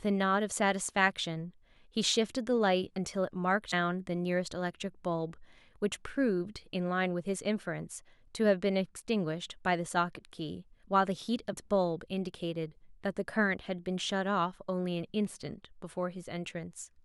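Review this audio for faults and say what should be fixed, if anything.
Two short blips break the speech, at 3.72 s and from 11.52 to 11.54 s. Both point to damaged data in a compressed stream. Some bytes in the encoded file were lost or overwritten. The decoder misread the affected frames and lost sync. It then hunted for the next valid frame header. The garbled output in between is what you hear as each blip. To prevent this, verify file integrity with checksums after transfer and storage.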